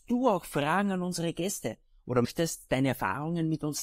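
At 2.24 to 2.26 s the speech is interrupted by a brief blip lasting about 20 ms, caused by damaged data in a compressed stream. The decoder received corrupted bytes, misread the affected frame, lost sync and had to search for the next valid frame header.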